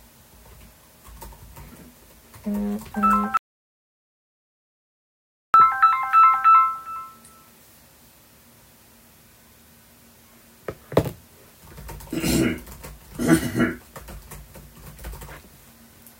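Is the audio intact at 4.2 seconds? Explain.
No, an audio dropout to silence runs from 3.37 to 5.54 s: the sound cuts to silence with no room tone, unlike a gate or fade, likely from lost input.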